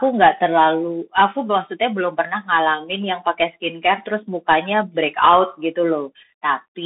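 Throughout, the speech passes through a Bluetooth CVSD headset codec. It spans only about 200 Hz to 3.7 kHz, with nothing above 3.8 kHz. Its coarse one-bit coding is plainly audible.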